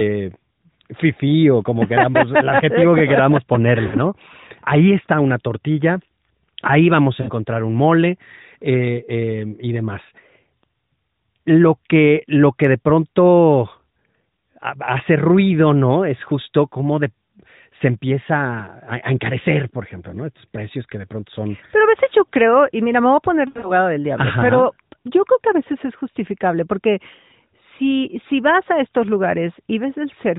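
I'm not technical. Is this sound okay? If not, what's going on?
No. The recording has lost AMR speech frames, short gaps from a mobile phone link. Radio errors corrupted brief chunks, and the phone filled each gap by stretching and fading the previous sound. It happens at 3.88–3.97 s, right after "el adjetivo que queramos"; at 7.22–7.31 s, between "ahí vamos a" and "un mole eh eh"; and at 23.48–23.72 s, just before "del diablo pero yo", where several scattered losses make the longest wobble.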